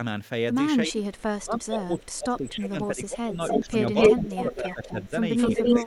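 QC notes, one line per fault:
0.85–0.97 s, 1.38–5.13 s and 5.63–5.87 s: speech suppressed in double talk. The speech dips by about 15, 25 and 10 dB, with about three seconds affected in the long stretch. This is likely an echo canceller ducking the near talker while the far side speaks.
1.15–1.22 s, 1.98–2.03 s and 3.48 s to the end: echo leak. Brief delayed copies at 318 ms, faint at first (about 35 and 25 dB down), are followed by a sustained copy at 254 ms, about 5 dB above the speech. This is likely residual loudspeaker pickup passing the canceller.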